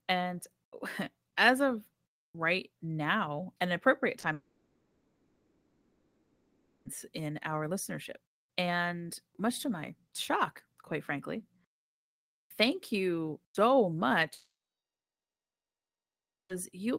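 At 4.19 s, just after "right now an appropriate", comes a short concealed packet loss. About 40 ms of audio arrived too late. The receiver patched the gap by extending the preceding sound, leaving a brief smear.

From 4.33 to 6.87 s, the sound stretches into a fading buzz, then about 0.37 s of quiet, before resuming at "in our listenership and". This is a long network dropout, likely from lost network audio.

A second long network dropout starts at 14.33 s, after "you so". A short tail fades, then about 2 s of silence lasts until 16.51 s.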